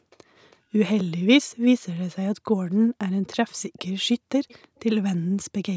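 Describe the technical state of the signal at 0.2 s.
Right around that point, from 0.10 to 0.17 s, there is an echo leak: a very faint, delayed copy of the speech, lagging by about 326 ms and sitting far below the direct signal. It is most likely a far-end loudspeaker whose echo canceller failed to fully suppress what its microphone picked up, so the residue was sent back down the line. It ends just before 0.2 s, within the call microphone processing's band, which carries nothing above 8 kHz.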